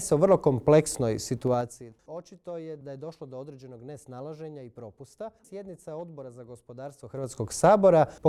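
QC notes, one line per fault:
1.44–1.88 s, zipper noise: a ticking zip rides on the sound as the level drops about 20 dB in 3 dB steps, roughly fifteen per second, unsmoothed.
7.0–7.44 s, zipper noise: the same ticking returns as the level climbs back up by about 20 dB in coarse 3 dB steps, each jump clicking.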